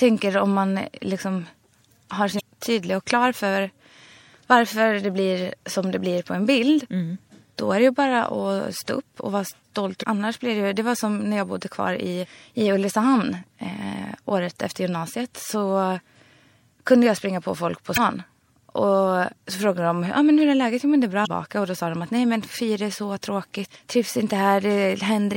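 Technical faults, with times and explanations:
Throughout: MP3 compression. The speech sounds watery and swirly, with the treble cut off and brittle, chirpy s sounds. Faint detail flickers in and out between frames. This is likely from a low bitrate, around 64 kbps, leaving too few bits for the upper band.
2.37–2.41, 9.99–10.04, 17.94–17.98 and 21.23–21.27 s: damaged data in a compressed stream. Each brings a short squawk or blip of about 45 ms. The decoder misreads a corrupted stretch, loses its place and resynchronises at the next good frame.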